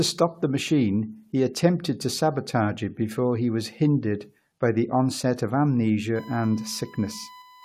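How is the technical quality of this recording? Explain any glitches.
There's one real problem: a USB whine that kicks in near the end. From about 6.16 s until the clip finishes at 7.64 s, a steady, fixed-pitch tone at 1 kHz sits under the speech, roughly 25 dB below it. That's the USB bus pulling current in 1 ms frames, and the ripple creeping into the audio through a shared power or ground path. It comes across as a thin, constant whistle that doesn't follow the speech at all.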